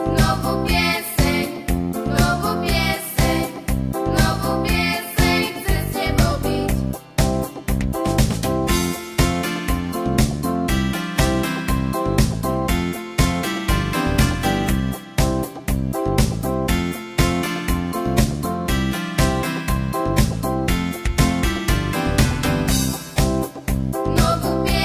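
No technical faults can be heard anywhere in the audio. Nothing in it points to a problem in the recording or playback chain.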